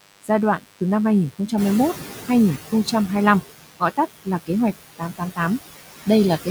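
A steady, thin 100 Hz buzz rich in harmonics sits about 20 dB below this speech throughout. That is DECT cordless phone buzz: a nearby handset or base station bursting every 10 ms, rectified by the audio circuit. The background also sinks by about 18 dB between phrases and rises under them. These are noise suppressor artifacts from band-by-band gain that treats steady noise as something to remove. Parts of the speech sound swallowed and faint at 0.01–0.81 s (drops up to about 19 dB), 1.31–1.52 s (about 17 dB), 1.94–2.88 s (about 12 dB) and across much of 3.42–6.47 s (about 18 dB). This is speech cut by the noise suppressor, which mistook soft consonants and quiet stretches for noise. At around 1.5 s the room noise jumps by roughly 13 dB. From 1.57 s it comes through with only about 10 dB of reduction, then gradually sinks until 2.57 s. That is the noise suppressor catching up, its noise estimate needing a full second to adapt to the new level.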